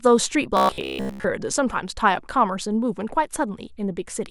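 Robotic sound from repeated short buffers runs from 0.57 to 1.24 s. Through this stretch the speech collapses into a rigid, metallic buzz pitched at about 66.7 Hz. It still loosely traces the syllables, but most of the real audio there is gone. The likely cause is audio arriving too slowly, so the software kept replaying a fragment of roughly 15 ms. That fixed loop length imposes the steady buzz.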